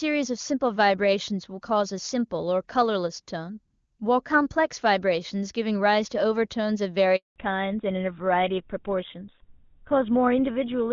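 At 7.16 s a handover gap begins. The call switches networks and no speech frames arrive, so the voice dies away into silence for 200 ms, until 7.36 s.

From 7.36 s to the end, a fallback to narrowband follows. The clear HD Voice sound gives way to a duller, rougher tone with nothing above 4 kHz, which fits GSM full rate.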